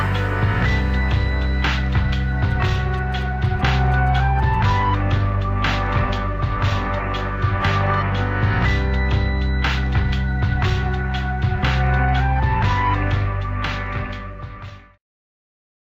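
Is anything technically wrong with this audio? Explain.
Yes. From 2.51 to 4.56 s there is GSM signalling burst interference: a galloping dit-dit-dit of short buzzes pitched at about 217 Hz, sitting roughly 30 dB below the main sound. A nearby 2G phone is sending short groups of radio bursts while signalling to its network. The audio circuit rectifies that radio energy, so the burst pulses turn into audible clicks and buzzes at the 217 Hz frame rate.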